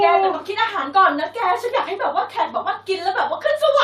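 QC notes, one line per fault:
No faults found.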